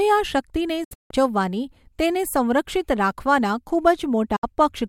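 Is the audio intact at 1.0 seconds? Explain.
No. Between 0.84 and 1.11 s speech drops into silent holes, longest 160 ms: a digital broadcast dropout, the receiver muting on lost frames.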